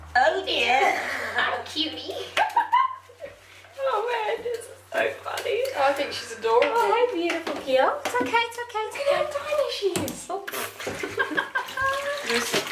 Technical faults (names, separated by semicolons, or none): none